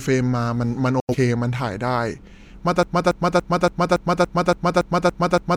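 At 1.0 s the speech drops out in a digital broadcast dropout lasting until about 1.15 s. The sound fades to silence over roughly 3 ms, the way a receiver mutes when incoming frames fail their checks. About 85 ms of programme is missing, which points to two lost frames. When reception recovers, the audio picks up further along rather than where it left off, so that part of the speech is gone.

From 2.83 s to the end of the clip a broken-record loop takes over. A 283 ms fragment of speech repeats exactly, back to back, ten times. The effect is a rhythmic stutter at roughly three and a half cycles per second. The likely cause is a stalled player or stream that kept re-sending the last buffer it held. Nothing that should have followed is heard.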